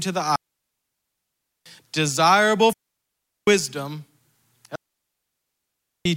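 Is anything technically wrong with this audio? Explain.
Yes. Digital wireless dropouts at 0.36–1.66 s (after "to the"), 2.73–3.47 s and 4.75–6.05 s: the receiver loses too much data and mutes, leaving clean 1.3 s, 0.75 s and 1.3 s silences without noise bursts.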